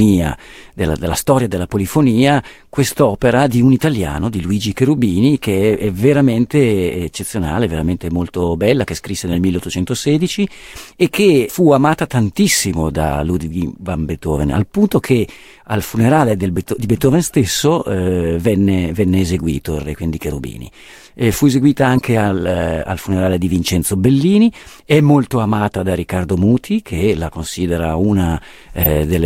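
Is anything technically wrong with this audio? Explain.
Yes. Corrupt frames were decoded three times: at 9.32 to 9.37 s, 21.96 to 22.01 s, and 28.83 to 28.87 s. Each time, flipped bits in a couple of compressed frames went to the decoder, which played them anyway. It misread gains and spectral codes and put energy at the wrong frequencies for about 40 ms. The result is a short, harsh chirp or noise burst unrelated to the sound. The first two are fairly loud, and the last is louder still, about 10 dB above them.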